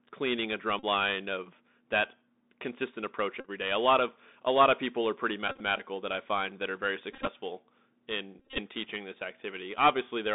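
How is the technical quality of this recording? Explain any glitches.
The quality is poor. The whole clip runs through a Bluetooth CVSD headset codec, and the voice packet repeats leave a string of short buzzing dropouts on top of that.

The CVSD damage is there from start to finish. The band is squeezed to roughly 200 Hz to 3.7 kHz. The codec sends one bit per sample at 64 kbps, saying only up or down with an adapting step, so loud bright sounds outrun the step and break up. The s sounds come out scratchy, and a grainy hiss sits under the speech.

The packet repeats happen when voice packets drop between the headset and the phone and the chip decodes the last good packet again. Repeats every 3.75 ms turn into a steady buzz near 267 Hz. The first one is at 0.79 to 0.84 s, after "cleaning a" and before "line of that consistent", and it replaces about 37.5 ms of audio. The next, at 3.40 to 3.49 s just after "of that consistent approach", covers about 41 ms. 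Then at 5.48 to 5.61 s, between "of people are pretty" and "that I find that", about 79 ms of loss is scattered over 120 ms, and the longest stretch of buzz is around 40 ms. At 7.13 to 7.28 s it's broken up into short bits, about 83 ms lost over 143 ms. The worst is at 8.39 to 8.59 s, with roughly 124 ms lost across 188 ms and buzz runs around 30 ms.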